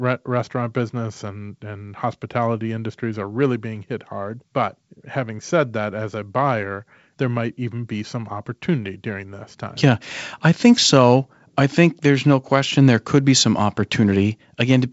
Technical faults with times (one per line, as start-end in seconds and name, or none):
none